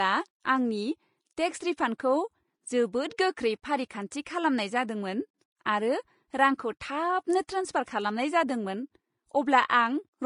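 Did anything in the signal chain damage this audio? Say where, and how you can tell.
Yes, at the codec stage, throughout the speech. This is likely low-bitrate audio saved at a high bitrate. The swirly, thinned artefacts of a coarse earlier encode remain, yet a spectrogram shows content up to 20.7 kHz, as a high-bitrate MP3 wrapper would, over patchy, hollowed bands.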